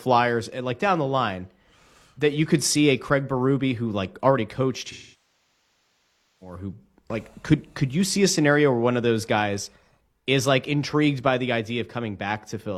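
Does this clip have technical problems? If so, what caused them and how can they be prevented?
Yes. AAC frame loss with concealment runs from 4.91 to 6.56 s, after "who like already coached" and before "who like could could". The decoder lost about 1.5 s of frames and rebuilt the gap from the last good spectrum, which smears at first and then decays toward silence before the sound fades back in. Prevent it with forward error correction or retransmission and a deeper jitter buffer on the transport link.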